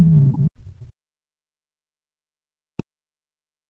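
From 0 to 0.94 s and from 1.13 s to the end, the speech drops by about 40 dB. Speech suppressed in double talk is the likely cause.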